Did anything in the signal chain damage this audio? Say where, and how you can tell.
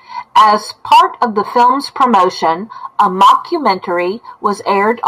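Yes, there's sample clock jitter at the converter from about 2.85 s to 5.07 s. A faint hiss rides on the speech, roughest on loud, bright sounds and gone in pauses. The clock wobbles by a couple of microseconds, leaving error roughly 40 dB under the signal.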